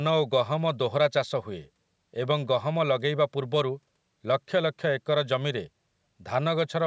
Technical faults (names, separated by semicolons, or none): none